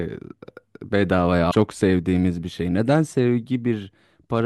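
From 1.50 to 1.55 s the speech skips forward with a brief garbled break, likely a broken MP3 bit reservoir: after missing frames, the following frames, which fit 24 ms frames, decode from the wrong bytes.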